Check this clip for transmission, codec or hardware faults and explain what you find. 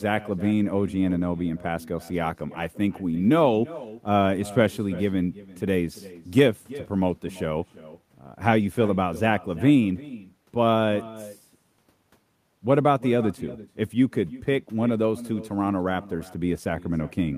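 One fault runs through the whole speech clip: echo with no canceller. The far end is playing the call on a loudspeaker, and its microphone picks that up and sends it back with nothing removing it. After a network round trip of roughly a third of a second, each phrase returns as a copy about 18 dB quieter and thinner, trailing just behind the original.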